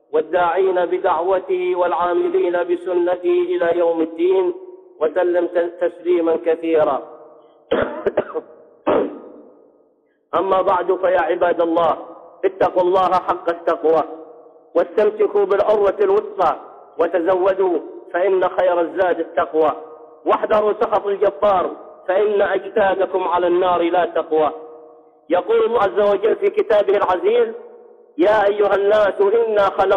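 At 25.74 s, lasting about 40 ms, damaged data in a compressed stream breaks through. The decoder misreads corrupted bytes, loses frame sync and hunts for the next header, giving a brief chirp, squawk, click or short hole.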